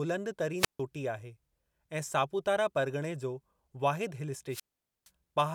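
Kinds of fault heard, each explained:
Wireless microphone squelch dropout: the radio link fades, hiss swells, then the receiver mutes the speech for 0.15 s and 0.46 s, unlike a digital gap.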